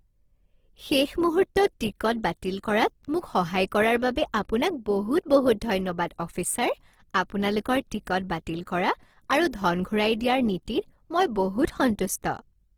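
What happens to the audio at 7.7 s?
At 7.7 s the speech carries the same Opus compression damage heard across the whole clip: clearly grainy, rough, noise-textured tone. Bands starved of bits are filled with folded or noise content, which fits Opus music mode at a likely bitrate near 16 kbps.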